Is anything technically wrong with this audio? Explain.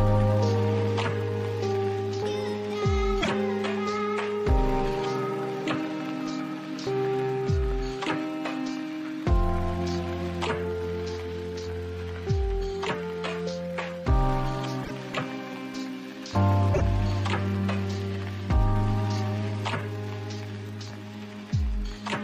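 Yes. Two kinds of fault can be heard.

At 3.20 to 3.29 s, 14.83 to 14.91 s and 16.73 to 16.82 s, the audio skips forward with brief corruption. Each lasts about 80 ms, roughly three frames of 26.1 ms. The likely cause is a broken MP3 bit reservoir. Frames went missing, so the next frames reached back for borrowed data and decoded someone else's bytes. The result is a jump plus brief corruption.

Between 20.43 and 21.47 s there are CD scratch ticks. Five sharp clicks fall about once per revolution, the longest around a millisecond long. A scratch wipes out more data than error correction can rebuild. The player then patches or mutes those samples on every turn, giving a steady ticking.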